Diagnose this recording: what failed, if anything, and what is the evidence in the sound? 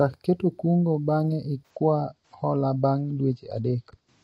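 The adaptive stream switched to a lower bitrate when the network slowed. From 1.71 s to the end, the speech abruptly loses everything above 8.5 kHz and codec artefacts rise, with no gap at the switch. This fits an AAC stream stepping down from roughly 96 to 32 kbit/s.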